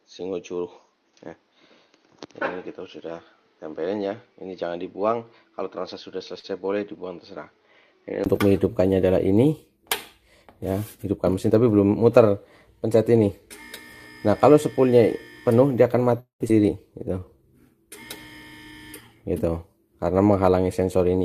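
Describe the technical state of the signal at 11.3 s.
At 11.3 s a jitter buffer speed-up runs from 11.16 to 11.42 s: the receiver trims pitch-period slices, about 50 ms in total, so the sound plays at 114% speed with unchanged pitch and a hurried feel.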